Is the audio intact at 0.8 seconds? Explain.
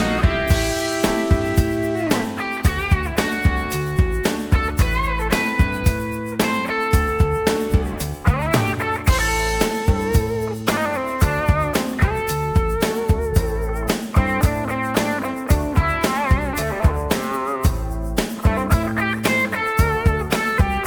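Yes, the audio is intact at 0.8 seconds, with no dropout, click, distortion or other fault at that point.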